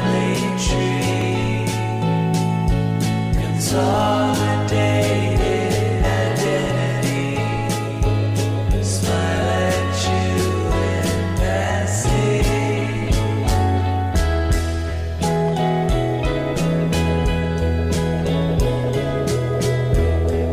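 A repeated buffer at 1.22 s: new audio arrived late, so the device replayed its last 1.45 ms block once, which is heard as a single brief click.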